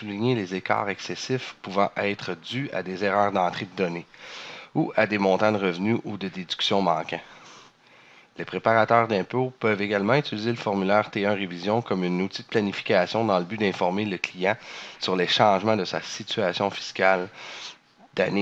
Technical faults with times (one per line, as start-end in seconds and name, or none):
none